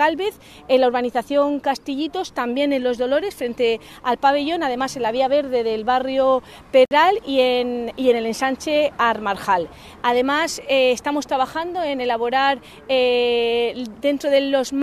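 At 6.85 s the audio stops dead for about 57 ms, until 6.91 s, then resumes exactly where it left off. This is a gap at a join of encoded pieces: two separately encoded sections were butted together without trimming the encoder's start-up delay and the padding on the final frame, so that dead air stays in the file. Unlike a packet-loss dropout, nothing is missing or concealed, and the edges are smeared by the codec.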